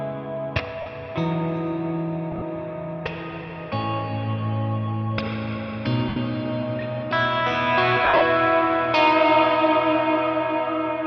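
Lost LE Audio frames at 0.81–0.86 s, 2.31–2.42 s (scattered, the longest gap around 40 ms), 6.09–6.17 s and 8.04–8.21 s (scattered, longest around 50 ms). The LC3 decoder fills each gap by repeating the last spectrum with random signs and fading it, so the audio smears into a noisy blur. On a spectrogram, clean harmonic lines dissolve into a diffuse, decaying smudge.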